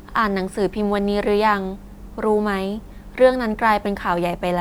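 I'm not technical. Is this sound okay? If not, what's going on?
Yes, no faults heard.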